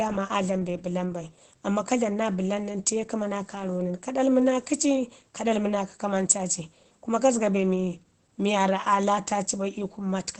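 Opus voice compression affects the speech from start to finish. Nothing is heard above about 8.6 kHz. That wideband limit and the plainly audible damage point to the SILK linear-prediction coder running at a low rate, around 12 kbps. At that rate the excitation is coded coarsely. The voice sounds muffled and hoarse, with a faint robotic edge. The audio is coded in 20 ms frames.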